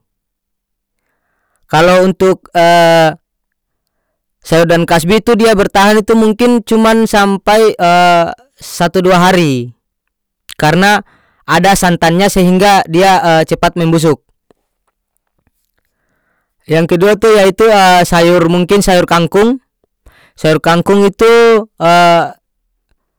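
Hard clipping runs through the whole speech clip. The signal is driven about 16 dB past full scale, flattening roughly a sixth of samples. Every loud syllable turns into harsh fuzz.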